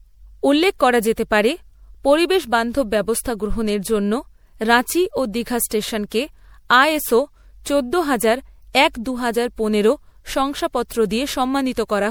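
From start to finish the speech carries generation loss: a swirly, hollow smear with softened consonant attacks, rougher than a single encode would leave. The likely cause is repeated MP3 encoding, around four passes at what sounds like 96 kbit/s, each requantising on a shifted frame grid so the errors stack. On a spectrogram this shows as scattered holes and flickering patches in the upper bands below a cutoff at 20.6 kHz, with transients smeared in the waveform.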